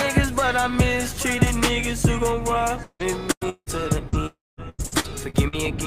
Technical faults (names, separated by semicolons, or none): repeated packet loss (robotic sound); long network dropout